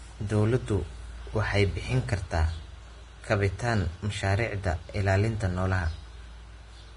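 Vorbis compression damage runs through the whole speech clip, likely from heavy Vorbis coding at what sounds like about 30 kbps. Nothing remains above 10.6 kHz, and the coarsely quantised treble replaces fine detail with hiss, leaving a grainy, roughened sound with smeared onsets.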